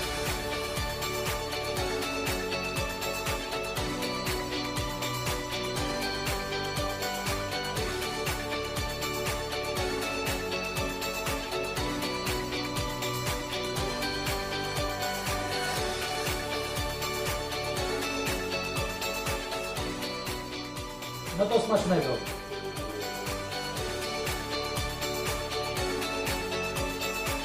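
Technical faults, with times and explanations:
Nothing stood out as a technical problem on listening.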